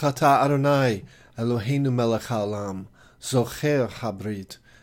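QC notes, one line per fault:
Nothing stood out on listening, and there is nothing to log for this clip.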